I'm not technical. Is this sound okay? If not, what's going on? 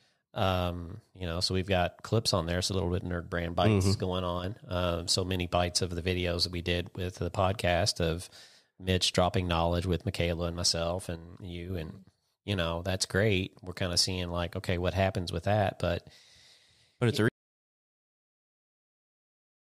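No. Twice the speech suddenly gets quieter and then recovers: briefly at 4.39 to 4.44 s, and again from 11.16 to 11.70 s, just after "and myself". This is likely a case of one channel dropping out, where one side of a stereo recording cuts out, so the combined sound loses part of its level.

At 17.29 s, right after "but it's a", the sound cuts to complete silence with no background left and stays silent to the end. This is an audio dropout to silence, likely from the input being lost, such as a disconnected device, a failed link or an accidental mute, while recording carried on. Whatever followed is gone.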